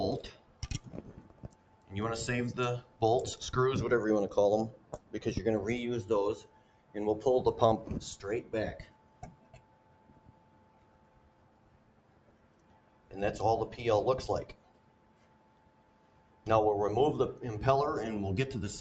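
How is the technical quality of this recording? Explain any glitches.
The recording is compromised by a speech-oriented noise suppressor acting on non-speech material, and it repeatedly turns down parts of the sound. The call chain's 8 kHz ceiling is audible as a top-end limit on everything.

Noise suppressor applied to music or sounds, throughout: the suppressor treats steady tones, ambience and tails as noise, so level swings by around 10 dB. Attacks pass while sustained material sinks, giving pumping and thinning. Unlike compressor pumping, the dips follow how steady the sound is, not how loud it is.

Sound cut by the noise suppressor, at 0.33 to 0.64 s, 1.09 to 1.91 s, 2.82 to 3.01 s, 4.77 to 5.13 s, 6.43 to 6.95 s, 8.84 to 13.12 s and 14.52 to 16.46 s: held or decaying sound is pulled down by up to about 8 dB and tails are truncated. It sinks rather than vanishing outright, which separates it from dropouts.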